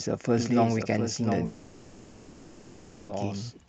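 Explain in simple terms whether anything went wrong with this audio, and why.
A doubled audio track runs through the whole clip. A second, quieter copy of the speech trails about 0.7 seconds behind the original, like an echo with no room sound to it. This likely happened because the sound was picked up twice, once through a slower route, or an edit left two copies slightly out of step. Because the copy is so clean and evenly delayed, it sounds like someone repeating everything a beat late.

A long network dropout runs from 1.45 to 3.11 seconds. For about 1.6 seconds, the likely cause is that no sound reached the listener's end at all. Instead of leaving a gap, the receiver kept stretching the last bit of sound it had, which comes out as a fading buzz or hiss across the whole stretch. When normal audio returns at 3.11 seconds, whatever was said during the gap is simply gone.

The speech also passed through an Opus call connection, which keeps sound only up to about 8 kHz. 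That limit is normal for this kind of call and is not a fault.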